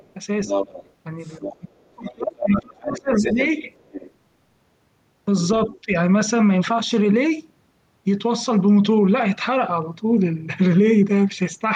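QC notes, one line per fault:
0.00–0.13 s, 0.46–0.91 s, 1.22–1.55 s, 2.39–3.44 s, 3.75–4.11 s, 5.73–5.78 s: other side's voice leaking through, a second voice ranging from barely audible to nearly as loud as the talker (about 5 dB below at 0.46 s). This is likely residual loudspeaker echo that the canceller missed, seen as separate harmonic stripes on the spectrogram.
1.38–3.38 s and 5.66–5.92 s: speech suppressed in double talk. The talker's level dips while the far side speaks, by up to about 30 dB early and about 10 dB later, likely because the canceller ducked both voices at once. On the waveform this shows as hollowed envelope segments.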